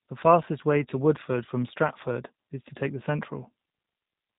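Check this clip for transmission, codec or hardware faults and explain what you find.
The clip has one codec fault, present from start to finish: G.729 codec coding of the speech, with plainly audible damage. Throughout the clip, the speech sounds slightly rough and synthetic, with a buzzy, reconstructed quality, which fits G.729A at 8 kbit/s. The codec does not transmit the waveform itself. Each 10 ms frame is rebuilt from a vocal tract filter, a pitch predictor and a few pulses, and everything above 4 kHz is discarded. On a spectrogram, energy stops sharply at 4 kHz, with smeared, frame-stepped harmonics below that.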